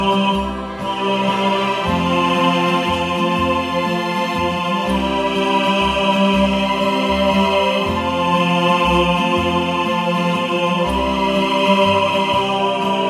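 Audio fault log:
No faults detected; no dropouts, level excursions or other defects found anywhere in the clip.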